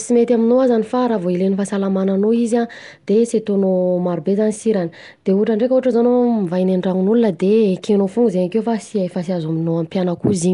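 From start to end the speech carries plainly audible coding damage that sounds like Nellymoser compression, most likely the old Flash Asao codec at a rate that fits about 44 kbps. Quiet frequency regions are swapped for synthetic noise, giving a grainy hiss around the voice and a watery, smeared texture. On a spectrogram, content stops sharply at 10.6 kHz, and between harmonics there are mottled noise patches arranged in short, evenly spaced blocks.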